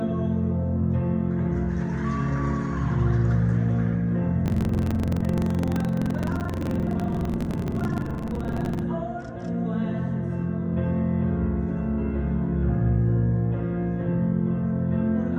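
From 4.44 s to 8.85 s there is buffer tearing: the writer and the playback hardware have slipped relative to each other on the ring buffer and cross partway through every period. Most of each buffer, roughly two thirds or more, replays audio from about 150 ms earlier, with hard splices at both edges. The result is a continuous robotic rattle at 23.4 Hz, which fits a 2048-sample buffer.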